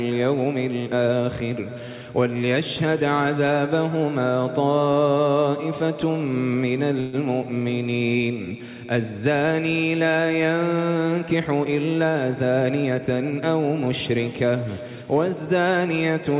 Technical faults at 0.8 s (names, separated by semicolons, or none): none